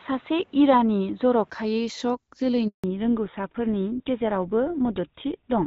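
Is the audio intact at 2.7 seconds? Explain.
No. At 2.7 seconds the speech is in a handover gap, running from about 2.68 to 2.84 s, a 160 ms dropout. While the call switched between networks, no speech frames reached the decoder, so the voice fades out within a few tens of milliseconds and stays silent until the new link resumes. Whatever was said then is gone. On a waveform this is a flat stretch of near-zero amplitude, and on a spectrogram it is an empty vertical band across all frequencies.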